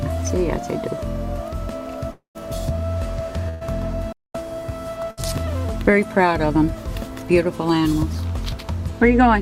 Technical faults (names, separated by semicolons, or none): long network dropout; burst of packet loss; playback stall